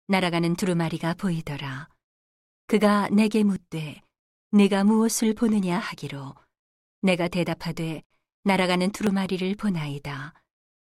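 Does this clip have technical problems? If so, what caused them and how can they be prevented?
Yes. The speech jumps abruptly forward three times, at 0.62 s, 3.56 s and 9.07 s, with no gap of silence, each time like a splice that skips a small piece. About 20 ms goes missing at the first two and about 10 ms at the third. The likely cause is a dropped buffer (overrun): the recording software fell behind, the hardware overwrote samples it had not yet read, and the audio on either side was joined directly. Giving the capture thread higher priority and using larger buffers prevents it.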